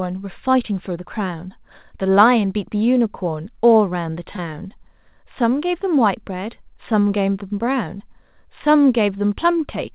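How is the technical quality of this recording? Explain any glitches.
The recording has two brief dropouts from short concealed packet loss, heard through a narrowband call path with nothing above 4 kHz, which points to a G.711 telephone codec.

At 4.36 to 4.40 s and again at 7.98 to 8.02 s, about 20 ms of audio failed to arrive in time. The receiver covered each gap by extending the preceding sound, then crossfaded back, leaving a short smear or wobble.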